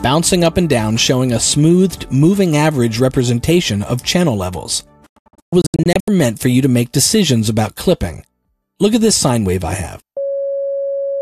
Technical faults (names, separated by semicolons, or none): digital broadcast dropout